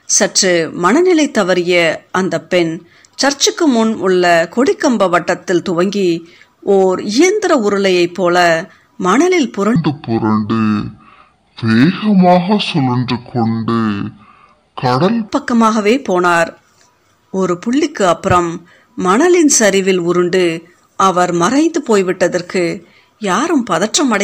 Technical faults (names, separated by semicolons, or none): hard clipping; section at the wrong speed